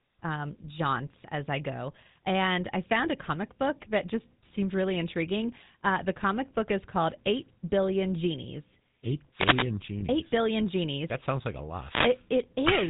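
Speech runs through the GSM full-rate codec for its whole length, and the codec damage is plainly audible. The voice has a buzzy, gravelly texture because the codec keeps only a simplified vocal-tract model and excites it with a sparse, regularly spaced pulse train. Anything above 4 kHz is missing, which leaves the top end dull and narrow. The overall character fits the 13 kbps full-rate coder. Two wireless microphone noise hits occur, from 9.32 to 9.72 s and from 11.75 to 12.27 s, the second coming right after "sounds like a". Each is a short swish of static lasting roughly 0.4 and 0.5 s. The sound matches an analogue FM radio link dropping into a fade as reflected paths cancel, so receiver noise swells up over the voice until the signal recovers. Between 10.00 and 10.04 s there are lost GSM frames. For about 20 ms the sound is briefly held as a rough, metallic ring rather than continuing naturally. 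The decoder has filled the gap by reusing the parameters of the last good frame, and the short duration is consistent with a single 20 ms frame being discarded.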